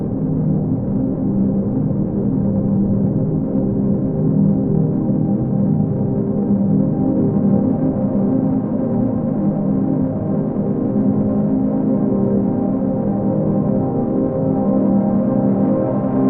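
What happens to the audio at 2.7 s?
At 2.7 s the audio is still in the low-quality opening of an adaptive stream starting at a low bitrate, which runs from 0.0 to 4.0 s. The player began on a cheap version, which sounds consistent with about 12 kbit/s Opus, so the treble is missing or synthetic and codec smearing is strong. It switches abruptly, with no gap, at 4.0 s to a stream that fits roughly 64 kbit/s. On a spectrogram the upper band is empty or blotchy until 4.0 s, then fills in sharply.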